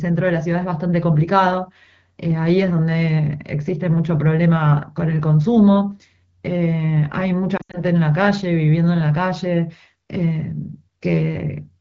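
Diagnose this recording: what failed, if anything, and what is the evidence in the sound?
At 7.57 s the speech starts to warble, then thins toward near-silence and recovers roughly by 7.79 s. That points to lost AMR speech frames on the radio link. About 120 ms of audio is missing, scattered over 160 ms, with the longest gap about 80 ms, which fits roughly six 20 ms frames failing their checksum. The AMR-WB decoder filled each gap by reusing the last good pitch and vocal tract settings at falling gain, so the sound dropped to near silence within two frames before good frames resumed.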